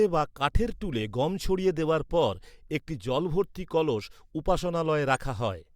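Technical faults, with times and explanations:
5.15 to 5.19 s, corrupt frame decoded: for about 46 ms, roughly two consecutive compressed frames carried damaged bits, and the decoder played them regardless, so misread gains and codes put energy at frequencies the speech never had. It comes across as a short chirp or blip peaking around -30 dBFS. On a spectrogram it shows as a small block of misplaced energy confined to those frames; the waveform shows a brief burst of uncharacteristic shape.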